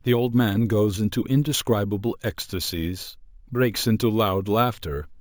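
From start to end, the speech carries imaging from sample-and-hold upsampling. The audio was raised to a higher rate by simply repeating each sample, with no smoothing filter. That leaves mirror copies of the spectrum. The lowest copy sits between 8 kHz and 16 kHz, which points to a 16 kHz original rate. It runs about 20 dB below the signal. It sounds like a bright metallic fizz riding on the speech, rising and falling with it.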